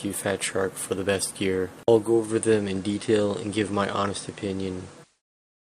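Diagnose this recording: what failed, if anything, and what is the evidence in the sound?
Digital radio blending to analogue, from 1.98 s to 5.22 s. The fault sits at the reception stage of a hybrid tuner. It lost the digital stream and cross-faded over about 361 ms to the FM broadcast of the same station, then blended back. While on FM, hiss rises to roughly 30 dB below the programme. The level stays matched across both blends, so the change is heard as noisier sound rather than a jump in loudness.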